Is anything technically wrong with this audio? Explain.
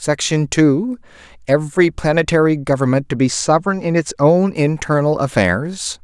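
Yes. From 3.17 to 4.30 s the speech shows channel delay (comb filtering). One channel runs late by roughly a single sample, about 0.04 ms, and when the two are combined to mono the shared content cancels at evenly spaced frequencies. With so short an offset the first notch falls around 10 kHz, so the damage sits in the top octave: the speech loses air and crispness and takes on a dull character for that stretch.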